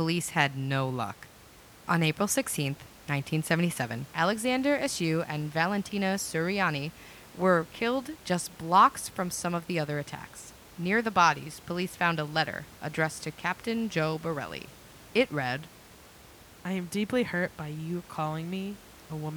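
No technical faults can be heard in this recording.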